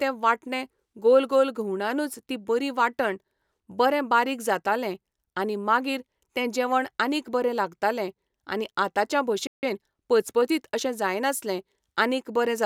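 At 9.47 s the speech just cuts out for about 0.16 s, going silent until 9.63 s before picking up again. That's a playback stall, most likely the player running dry of buffered data or its thread getting held up.

Right after, from 9.63 s to 10.67 s, you get time-compressed catch-up. The player trims its backlog by snipping out small chunks and cross-fading them, so the speech runs about 1.15 times fast at normal pitch, beginning with "अशें जायनासलें".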